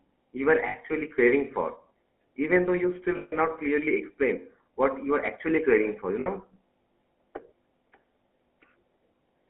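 The clip is speech carried over a GSM full-rate codec. The band runs only from 250 Hz to 3.4 kHz, so it sounds thin and boxy. The codec damage is plainly audible throughout. It gives the speech a buzzy, gravelly roughness. This comes from the codec modelling the vocal tract and exciting it with sparse, regularly spaced pulses. That pulse excitation fits the 13 kbps full-rate codec. There are also three spots with lost GSM frames. The first runs from 0.68 to 0.75 s, just after "you were", and lasts 60 ms. The second runs from 3.16 to 3.33 s, after "even though you still", and lasts 160 ms. The third runs from 6.20 to 6.27 s and lasts 60 ms. In each gap, the decoder repeats the last good frame. The sound freezes into a rough, metallic ring. The short gaps point to about three lost 20 ms frames each, and the longer one to about eight.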